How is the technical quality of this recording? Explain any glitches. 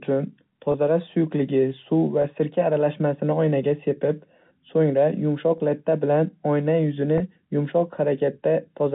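Four brief dropouts interrupt the speech, at 0.72, 2.22, 5.58 and 7.18 s. Each is packet loss with pitch repetition. About 20 ms of audio went missing each time, which fits one lost packet. The receiver filled each gap by repeating the last pitch period. Each sounds like a short, slightly held buzz before normal speech resumes. The G.711 telephone coding caps the sound at 4 kHz and adds only faint noise.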